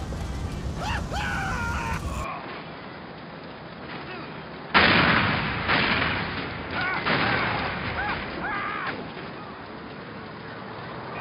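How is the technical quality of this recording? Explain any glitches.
The recording has one clear fault. From 2.24 s to the end, the sound turns dull and boxy, with nothing above 5 kHz, a drop in level of about 5 dB, and faint new background noise. The likely cause is the input switching to a poorer device with a narrower band and its own noise floor.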